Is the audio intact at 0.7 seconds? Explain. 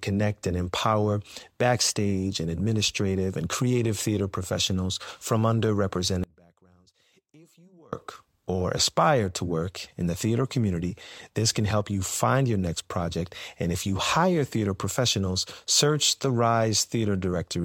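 Yes, the speech at 0.7 seconds is intact, with no dropout, click, distortion or other fault at that moment.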